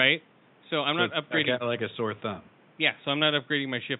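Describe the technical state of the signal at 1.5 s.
At 1.5 s the speech signal is intact, with only the room's own background noise sitting about 32 dB below the speech.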